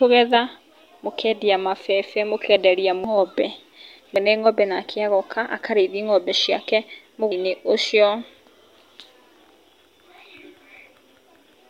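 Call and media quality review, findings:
Compressed frames skipped at 3.04, 4.16 and 7.32 s: decoder dropping missing or damaged frames, consistent with a frame length near 93 ms. Speech jumps forward about half a second at the first two points and roughly 0.4 s at the third.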